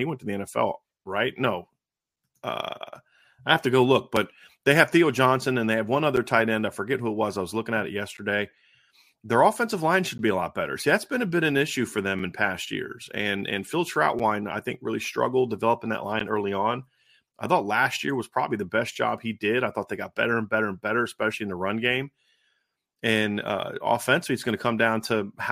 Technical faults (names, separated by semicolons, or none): gap between stream segments